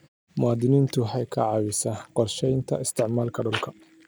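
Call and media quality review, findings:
Nothing stood out on listening to the speech in this clip.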